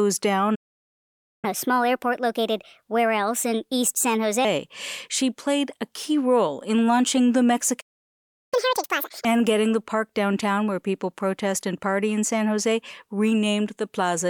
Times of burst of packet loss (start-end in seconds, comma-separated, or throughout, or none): none